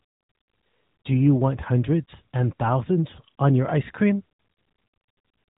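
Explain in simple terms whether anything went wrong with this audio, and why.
Nothing went wrong here, so there's really nothing to worry about; the speech in this recording comes through just the way it's meant to.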